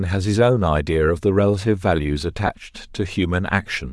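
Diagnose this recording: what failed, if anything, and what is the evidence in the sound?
Codec stage: the speech carries a plainly breathy, grainy top end throughout, with noise filling the upper band, likely Bluetooth LC3 compression, which fits roughly 48 kbps.

Transmission stage: lost LE Audio frames at 2.47 to 2.49 s. The decoder repeated the last spectrum as a 20 ms noisy smear, consistent with two dropped 10 ms frames.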